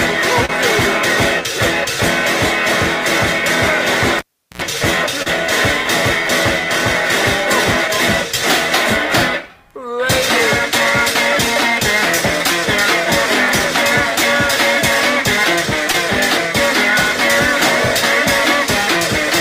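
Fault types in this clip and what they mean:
Short concealed packet loss: brief stretches of about 20 to 40 ms never arrived, and the receiver extended the preceding sound to cover them before blending back. This is heard as a short smear or wobble at 0.45, 5.22 and 15.92 s, with no silent hole or pop.
Cable pulled and plugged in: the connection breaks for about 380 ms starting at 4.19 s. There is a pop, near silence, then roughly 80 ms of 60 Hz mains buzz as the plug reseats, and a second pop. The hum burst sets it apart from a plain dropout.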